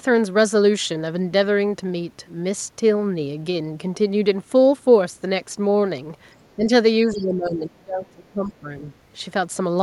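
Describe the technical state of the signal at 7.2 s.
At 7.2 s the signal is inside a stretch of speech suppressed in double talk, running from 7.06 to 8.64 s. The level sags by up to roughly 25 dB, likely because an echo canceller turned the talker down along with the echo, so the waveform envelope visibly hollows out. Within that dip, from 7.16 to 7.23 s, the other side's voice leaking through adds a brief scrap about 25 dB below the speech. It is likely residual loudspeaker echo and shows on a spectrogram as a faint, separate trace.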